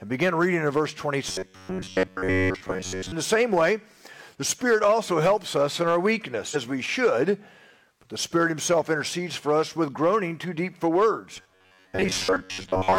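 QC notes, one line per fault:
1.29–3.13 s and 11.37–12.98 s, robotic sound from repeated short buffers: a rigid, metallic buzz at 93.8 Hz replaces the natural texture, loosely tracing the underlying sound. The likely cause is audio arriving too slowly, with playback looping the last fragment while new material is dropped. A repeat period of about 10.7 ms fits that pitch, and roughly seven tenths of the audio is repetition. A spectrogram shows dense harmonics locked at 93.8 Hz multiples, and the waveform shows identical short cycles.
6.51–6.56 s, stream segment skipped: the sound jumps abruptly ahead with a small blip, so a stretch of the programme never plays. The likely cause is one segment of a segmented stream that failed to load, with the player carrying on from the next. On a waveform this looks like a hard discontinuity where the envelope changes character instantly. On a spectrogram it is a thin vertical broadband click, with spectral content that no longer lines up across the cut.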